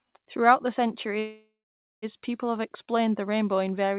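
At 1.19 s the speech stops moving forward. A call audio freeze runs until 2.05 s, just before "people have". The last sound is stretched into a fading buzz or hiss. About half a second of it is flat silence. Then the speech picks up exactly where it left off, so nothing is lost. The timeline is simply pushed back by about 0.83 s. The likely cause is delayed packets draining the jitter buffer. The narrow call sound, with nothing above 4 kHz, fits a G.711 path.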